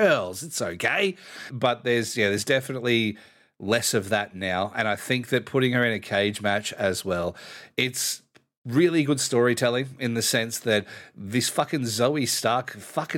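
There are no technical faults to describe in this speech recording.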